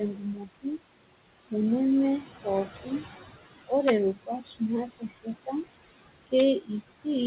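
Throughout, the room noise, about 12 dB below the speech, dips between phrases and swells under them. These are noise suppressor artifacts, pulling steady noise down by about 18 dB frame by frame. The dull, 4 kHz-limited band fits a G.711 A-law call path.

From 0.14 to 0.79 s, parts of the speech turn faint and swallowed, sinking by as much as about 21 dB. This is speech cut by the noise suppressor: it mistook quiet speech for noise and lowered it with the background. The same happens from 4.15 to 4.61 s (about 21 dB), from 4.87 to 5.28 s (about 17 dB) and from 6.61 to 7.06 s (about 16 dB).

At 3.88 s a sharp, violent crack breaks through a loud moment. This is integer overflow: a peak driven about 2 dB past the largest value wrapped to the opposite sign instead of being limited. A second, similar crack occurs at 6.39 s, where the peak only just exceeded the limit.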